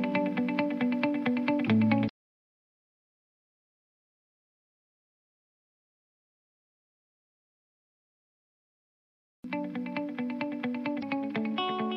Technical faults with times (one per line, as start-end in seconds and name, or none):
2.05-2.10 damaged data in a compressed stream
10.99-11.03 damaged data in a compressed stream